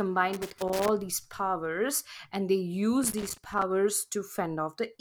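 From 0.33 to 0.89 s, just before "these powers and", and again from 3.03 to 3.63 s, loose connector crackle breaks up the speech: a worn contact opening and closing chops the signal into irregular scratchy bursts, showing as ragged dropouts and spikes on the waveform and broadband vertical streaks on a spectrogram.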